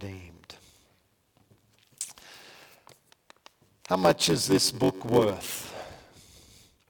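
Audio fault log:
throughout, block size mismatch (padded): each block arrives short and is topped up with zeros, so a steady 93.8 Hz buzz rides under the sound, which fits a 512-sample read block. The audio runs at 0.861 times normal speed, with pitch essentially unchanged.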